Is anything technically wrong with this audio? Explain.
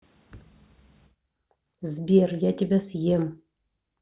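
No, nothing technically wrong can be heard in this speech recording; the signal comes through intact, with no audible fault anywhere in it.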